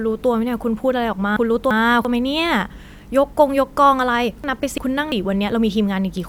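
Chunks out of order at 1.37–2.05 s and 4.44–5.12 s: two adjacent 341 ms chunks swap places, jumbling the speech, with three hard joins.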